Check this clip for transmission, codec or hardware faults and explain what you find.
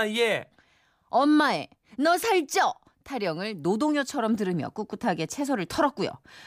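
Checking this clip turns up no faults to explain.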